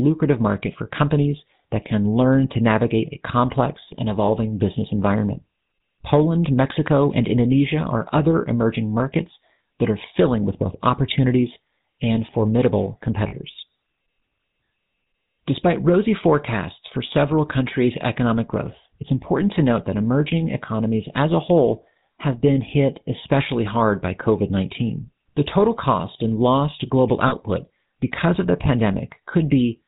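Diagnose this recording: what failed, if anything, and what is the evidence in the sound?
The codec stage is at fault throughout: a GSM full-rate codec gives the speech a buzzy, gravelly roughness and nothing above 4 kHz, which fits the 13 kbps full-rate coder's pulse-driven vocal-tract model. Plain band-limiting would sound dull but smooth, not rough.

Lost GSM frames on the network path cause brief rough, metallic rings at 4.26–4.29 s, 13.28–13.33 s and 27.28–27.34 s, each 20 to 40 ms long. The decoder repeated the last good frame, so each gap is held and smeared rather than cut to silence as a plain dropout would be.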